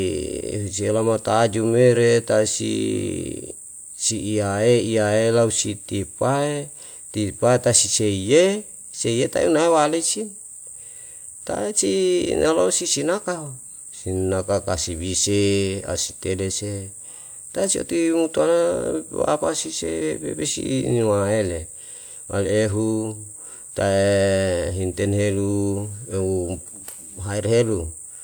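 Nothing in this speech recording stands out as a technical fault, so there's nothing to walk through here.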